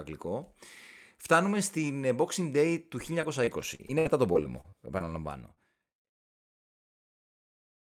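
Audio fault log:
3.21–5.58 s, repeated packet loss (robotic sound): eleven separate dropouts fall across this stretch of speech, the longest about 62 ms, together removing about 280 ms of signal. Each hole is bridged by extending the last received fragment, so roughly 0.3 s of the span is synthetic continuation. The quick succession of patched gaps produces the choppy texture, running on toward the smooth fade-out that completes at about 6.11 s.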